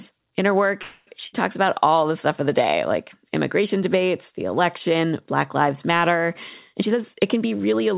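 From 0.82 to 1.09 s the speech stops advancing and the last sound is drawn out as a buzz or hiss that fades over about a quarter of a second. This is a call audio freeze. The likely cause is packets held up in transit, so the jitter buffer ran dry and the receiver stretched what it already had. Unlike a loss, nothing is skipped. When the speech picks up again it continues exactly where it paused, now running about 0.25 s later than before.

At 1.27 to 1.35 s there is a shorter break of about 60 ms, a burst of packet loss. Here the packets never arrived in time, so the receiver again extended the last sound and faded it for roughly 60 ms. The difference from the freeze is what comes after. The speech resumes further along, with about 60 ms of the original simply gone. The result is a small jump rather than a pause followed by a seamless continuation.

From 6.72 s to 7.95 s the speech runs noticeably faster, about 117% of normal speed, while the pitch stays where it was. 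That combination marks a jitter buffer speed-up. Having built up surplus delay, the buffer shed it by cutting many tiny pitch-period slices, around a fifth of a second in total. Because whole cycles are removed rather than the audio being resampled, the voice sounds hurried but not raised, heard through the narrowband call path that leaves nothing above 4 kHz.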